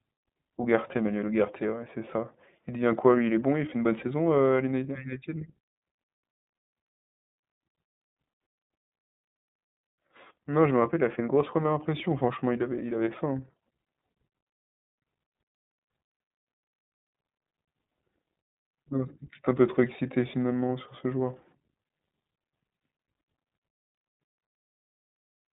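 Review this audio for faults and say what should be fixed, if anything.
The iLBC codec runs through the whole speech clip: the band is confined to roughly 150 Hz to 3.7 kHz with nothing above 3.8 kHz, and each frame's excitation is coded independently, giving a plainly rough, synthetic texture that fits 30 ms frames at the 13.33 kbps mode. Prevent it by capturing from a wideband source or negotiating a wideband codec on the call path.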